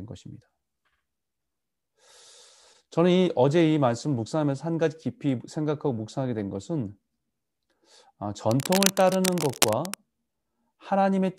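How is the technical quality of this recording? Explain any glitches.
One fault stands out: cable scratch noise from about 8.5 s to 9.9 s. It is likely caused by a worn cable, connector or control being moved, so that its contact resistance jumps around rapidly and injects irregular bursts of noise into the signal. For roughly a second and a half, a dense, uneven scratching and rustling sits over the speech, only slightly quieter than the speech itself.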